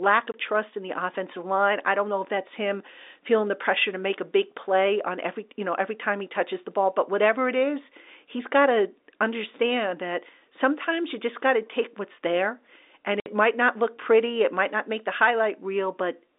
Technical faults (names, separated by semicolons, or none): packet loss filled with silence